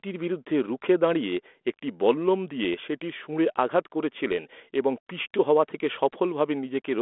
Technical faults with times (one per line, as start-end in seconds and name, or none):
none